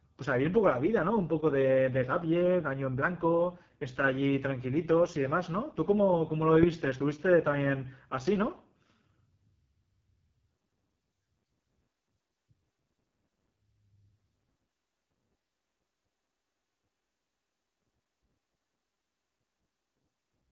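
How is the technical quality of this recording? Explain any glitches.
Quality is poor throughout: the speech comes through an AMR wideband (HD Voice) codec at a very low rate. Across the whole clip, the pulse-driven speech model is starved of bits, so voicing turns rough and raspy, which fits AMR-WB's lowest 6.6 kbit/s mode. Nothing reaches above about 7.4 kHz, and unlike narrowband telephone coding, the sibilants keep a synthetic hiss at the top.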